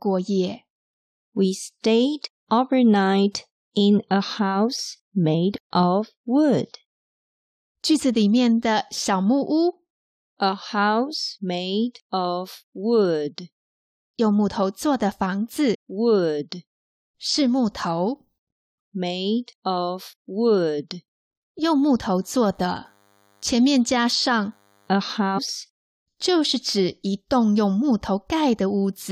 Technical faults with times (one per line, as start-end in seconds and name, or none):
15.73-15.75 damaged data in a compressed stream
22.22-24.94 DECT cordless phone buzz
25.37-25.39 damaged data in a compressed stream